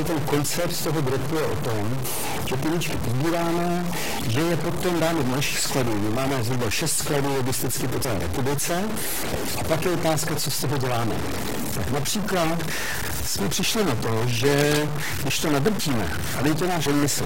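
A grainy noise or distortion runs through the whole speech clip. Pauses are not clean either. They fill with a steady hiss. This fits a stuck bit, likely from a faulty line or converter, forcing about half the sample values off by one fixed amount.

At 8.04 s, at 9.31 to 9.35 s and at 16.86 s, the speech jumps forward. These are compressed frames skipped. Whole frames were not played. Roughly 70 ms is lost at 8.04 and 16.86, and around 20 ms at 9.31.

From 14.53 to 14.80 s, dense, uneven bursts of noise sit over the speech. They are only a little quieter than the speech itself. It sounds like scratching or rustling. This is cable scratch noise, likely from a worn cable or connector being moved.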